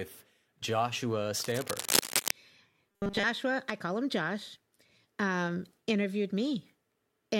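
From 1.35 to 2.33 s there's cable scratch noise, harsh rustling about as loud as the speech, likely a worn connector or cable shifting and its contact flickering. Then at 2.89 to 3.24 s, just before "I call him", you get a robotic sound from repeated short buffers: a rigid 200 Hz buzz, likely a roughly 5 ms chunk looping over most of that stretch.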